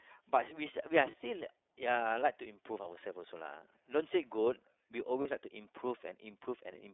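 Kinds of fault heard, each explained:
iLBC codec: The speech is squeezed into a telephone band of roughly 300 Hz to 3.6 kHz and carries a plainly audible rough, slightly synthetic edge. Each frame's excitation is coded independently. The coarseness points to a bitrate near 13.33 kbps with 30 ms frames. Simple band-limiting would only dull the sound, but this rough, synthetic texture marks a low-rate speech codec at work.
lost iLBC frames: At about 1.11 s and again at about 5.22 s, roughly 30 ms of speech is replaced by a brief held, faintly buzzy sound. Each fits a single lost frame, which the decoder covers by repeating the last pitch cycle with added noise. A plain dropout would leave silence or a click. Here the gap is filled with a smeared continuation, and the voice recovers immediately because each frame decodes on its own.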